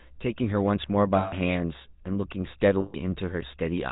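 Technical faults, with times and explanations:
Throughout: GSM full-rate codec. The speech has a buzzy, gravelly roughness, plainly audible across the whole clip, and nothing reaches above 4 kHz, so the top end sounds dull and boxed in. The codec imitates the vocal tract as a filter and excites it with a regularly spaced pulse train that keeps only one excitation sample in three. That coarse excitation is the source of the grit, and the character fits the 13 kbps full-rate coder.
1.18 to 1.33 s and 2.80 to 2.95 s: lost GSM frames. At each of these points, roughly 140 ms of audio turns into a held, metallic ringing instead of continuing the speech. That length fits about seven consecutive 20 ms frames going missing. The decoder fills each gap by reusing the last good frame's parameters. The frozen filter and pulse settings produce that rough, static ring until good frames arrive again.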